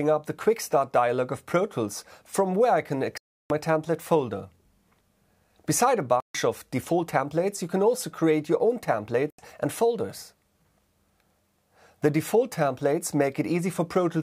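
The sound cuts to silence at 3.18 to 3.50 s, 6.20 to 6.35 s and 9.30 to 9.39 s, then resumes further along, as if it had kept playing. These are likely Bluetooth dropouts: packets arrived too late for the headphones and were discarded.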